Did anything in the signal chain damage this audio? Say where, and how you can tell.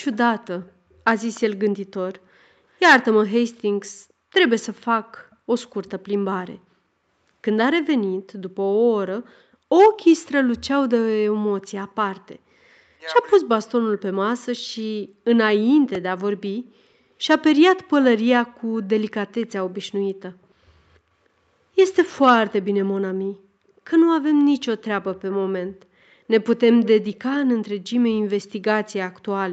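Yes. The call processing stage shows an echo leak: the far end's echo canceller likely let part of its loudspeaker pickup through and sent it back. A faint copy of the speech trails the original by 300 ms from 0.12 to 1.41 s at about 25 dB down, again from 5.31 to 5.9 s at about 35 dB down, and in a brief scrap at 19.41 to 19.47 s at about 30 dB down. It is heard as a delayed ghost behind the talker.

Between 12.94 and 14.5 s the speech is suppressed in double talk. Both ends were talking at once, and the echo canceller likely mistook this talker for loudspeaker echo and pulled the level down. Within that span, about a second of speech dips in pieces, by as much as 40 dB at the deepest point, so syllables thin out or drop away while the other side speaks.

At 15.95 s there is a repeated buffer at the driver or playback buffer stage. Fresh audio arrived late, so the device replayed its last block three more times. 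The block lasts 1.45 ms, which fits a buffer of 64 samples. Because the repeats are so short and joined with hard edges, the result is a tiny click or buzz, not an audible stutter. Above this, the codec path's 8 kHz ceiling is audible as a limited top end.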